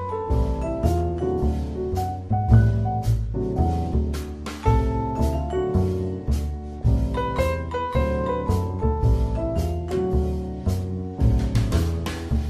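From the start, the sound is dull and plainly gurgling. This is MP2 compression, most likely from a low bit budget, which fits a rate around 80 kbps. MPEG Layer II divides the audio into 32 equal sub-bands and shares out bits among them. Here there are too few. The upper bands keep dropping out, so the top end flickers and fades. The bands that remain are coarsely quantised, which adds a granular roughness throughout.

At 6.73 s, lasting until 6.82 s, a short burst of DAB burbling cuts in. It is a brief burble over the programme. Bit errors have slipped past the error correction into the MP2 data, at a rate of roughly 0.15 percent. Corrupted samples put short blips of noise into single sub-bands. The burst spans what sounds like about five frames.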